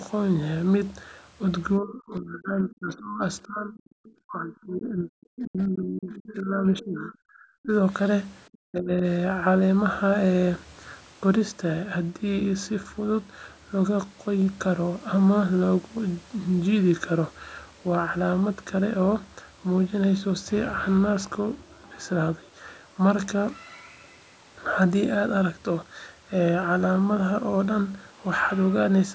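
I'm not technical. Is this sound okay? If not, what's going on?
No. In the first nine seconds the speech keeps sinking to near silence or breaking into pieces, from 1.8 to 3.2 s, 3.45 to 4.0 s, 4.2 to 7.7 s and 8.65 to 9.0 s. The longest stretch lasts about three seconds. This is speech suppressed in double talk. Both people were likely talking at once, and the call's echo-cancelling software couldn't tell this talker apart from the other person coming out of the speaker, so it turned everything down.

Between those dips, from 4.05 to 4.09 s, a very faint scrap of a second voice slips through, far quieter than the main speech. This is the other side's voice leaking through. The talker's device was likely playing the other person aloud, and the microphone picked up a trace that the echo canceller didn't fully remove. It is a tiny blip, not a clear second voice.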